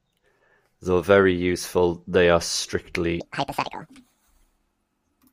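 A speech clip that runs fine until 3.20 s, then plays at the wrong speed through to the end at 5.33 s, about 1.72 times too fast. Pitch jumps with it, close to ten semitones up, so the sound turns squeaky and rushed, likely from being fitted to the wrong clock.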